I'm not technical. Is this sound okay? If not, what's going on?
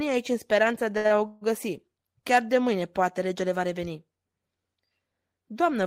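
No. The speech has two kinds of hiccup close together, both just after "aici în speranța de".

From 0.97 to 1.06 s and again from 1.06 to 1.12 s there is a short stall from a late packet. A piece of the call data arrived late, so the phone stretched the last sound it had, for about 0.07 s and then about 0.04 s, before "a o" carries on. Nothing is lost. The speech is held a moment too long, so it sounds like a drawn-out syllable rather than a break.

From 1.26 to 1.43 s, just after "speranța de a o", there is a call audio freeze. The likely cause is data held up on the way, which left the phone with nothing new to play for about 0.15 s. It filled that gap by carrying the last sound on as a fading buzz or hiss, and no silence is heard. Again nothing is missing. What sets it apart from the stalls is that it is longer and the sound stops behaving like speech for a moment.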